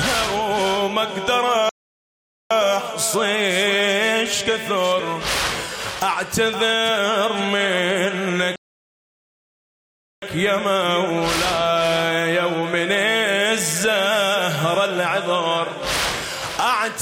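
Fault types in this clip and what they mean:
Playback stall: the sound cuts out mid-flow for 0.81 s at 1.69 s and 1.66 s at 8.56 s, likely because the player ran out of data or its thread was blocked. The waveform goes flat and the spectrogram shows empty vertical bands.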